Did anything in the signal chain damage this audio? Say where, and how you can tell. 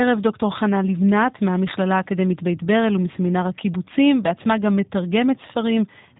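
Yes, at the codec stage: the whole speech clip has passed through a G.729 codec, and the damage is plainly audible. Nothing survives above 3.8 kHz, and the voice has the slightly rough, synthetic edge of speech rebuilt from a vocal tract filter, pitch predictor and sparse pulses, which fits a G.729A encode at about 8 kbit/s. A spectrogram shows a hard ceiling at 3.8 kHz and smeared, grainy harmonics below it.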